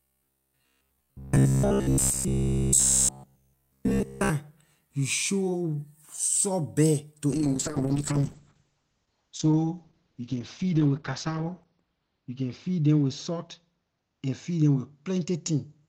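From about 0.02 s to 4.30 s the speech turns into a stiff, metallic buzz pinned at 66.8 Hz. That's the robotic sound from repeated short buffers: audio likely arrived too seldom, so a roughly 15 ms chunk was looped over and over, with practically nothing new getting through.

Then at 7.32 s there's a call bitrate drop that lasts to the end. The encoder falls from 64 to 8 kbps and sits at the bottom for about 4.1 s. Bandwidth shrinks from 20 kHz to 6 kHz, so the speech goes muffled and rough.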